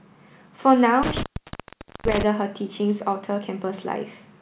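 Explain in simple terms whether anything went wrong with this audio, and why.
Two things went wrong. From 1.03 to 2.23 s there is an intermittent contact: a loose plug or cable opens for about 0.83 s, so the speech drops out with crackles at the edges and only faint hiss in between. Around 1.48 s there is a short concealed packet loss: 40 ms of the call never arrived, and the receiver smoothly continued the previous sound to cover the hole. It sounds like a brief smear rather than a crackly gap. The narrow, phone-like tone, with nothing above 4 kHz, comes from the call line itself, not from either fault.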